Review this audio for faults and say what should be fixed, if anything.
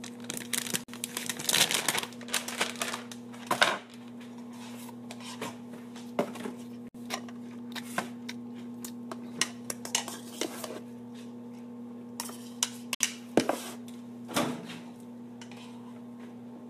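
Separately encoded pieces were joined without trimming encoder delay and padding, leaving a gap at each join: silences of 48 to 60 ms at 0.84, 6.88 and 12.95 s, every 6 s. To prevent it, trim encoder delay and padding at each join, or encode the sound as one continuous stream.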